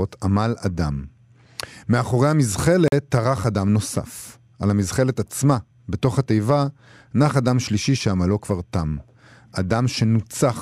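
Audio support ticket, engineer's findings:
Block of digital silence, 2.88 to 2.92 s. Speech drops to silence for about 43 ms, hard cut both edges. Probable cause: output buffer not filled in time; length fits a 2048-sample buffer.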